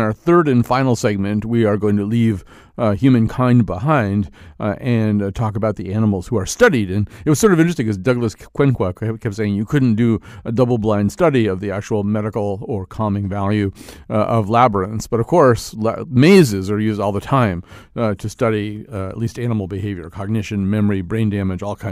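Nothing goes wrong anywhere in the speech recording, so there's no fault to point to at any moment.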